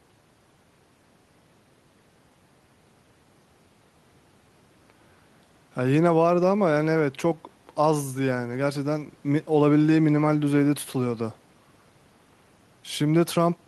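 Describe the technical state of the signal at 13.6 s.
At 13.6 s, near the very end of the clip, the speech signal is intact, with no dropout, distortion or other fault to be heard.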